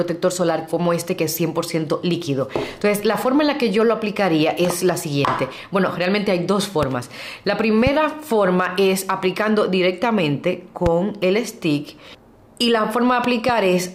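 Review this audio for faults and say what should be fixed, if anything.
Loud pops occur at 5.28–5.30 s, 6.83–6.85 s, 7.87–7.89 s and 10.86–10.89 s, with a pair of pops between 13.24 and 13.51 s. Each is a sharp transient peaking around 10 dB above the surrounding sound, which continues underneath. The likely cause is a brief voltage step or pulse entering the chain, from a connector, a switch, static discharge or a driver glitch, which the downstream circuitry shapes into a short burst. On a waveform each pop appears as a narrow spike towering over the programme level. On a spectrogram it shows as a thin vertical stripe spanning the full frequency range. To prevent it, secure and clean connections, avoid switching or hot-plugging while recording, and keep audio drivers stable.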